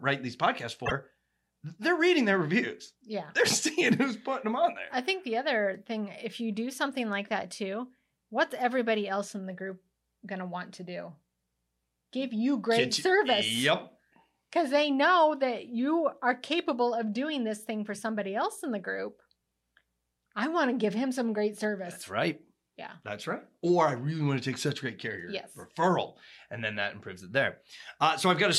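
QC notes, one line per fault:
0.85–0.92 s: broken MP3 bit reservoir. A brief chirp, burst of noise or short hole, with the speech seeming to skip ahead. This is likely from frames cut out of the stream. The frames that follow reach back into the reservoir for borrowed data, find another frame's bytes, and decode them as garbage until they resynchronise. The 67 ms disturbance spans roughly two and a half 26.1 ms frames. On a spectrogram it shows as a short, broadband smear out of step with the surrounding harmonics. On the waveform it shows as a ragged patch.
9.72 s and 21.64 s: dropped samples. Each is a single sharp click, one between "everybody else in the" and "going to want to", the other just after "give him some great". The likely cause is a handful of samples, well under a millisecond, missing from the stream. The waveform jumps straight from one value to a later one, and that step produces the click. 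Far too little is lost to remove any speech. A spectrogram shows a thin vertical line at each time, and the waveform shows a discontinuity.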